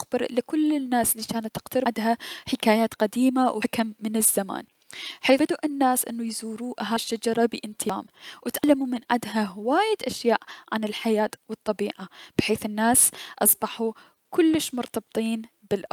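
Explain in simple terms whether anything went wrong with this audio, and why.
The speech has a timing problem that runs through the whole clip. This is clock drift between sender and receiver. The device that sent the audio kept time slightly faster than the one playing it, by roughly 4 percent. So sound arrived a little quicker than it could be played out. The receiving side had to keep adjusting to avoid falling behind. You can hear this as small, uneven stumbles rather than one clear break.

Those adjustments are the repeated timing corrections. From 0.32 s to 15.88 s the receiver keeps trimming tiny bits of sound so it can keep up. The result is speech running at about 104 percent of its normal pace. Each trim is small and spaced unevenly. Together they make the rhythm feel slightly rushed and jittery, with faint hiccups here and there.

There are also sudden jumps at 1.86, 3.62, 5.39, 6.97, 7.90 and 8.64 s. 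These are most likely a dropped buffer (overrun). A chunk of audio was overwritten before it could be collected, and the sound on either side was joined together. There is no gap of silence. The speech simply leaps ahead. About a third of a second goes missing at 1.86 and 6.97 s, and about a tenth of a second at the others.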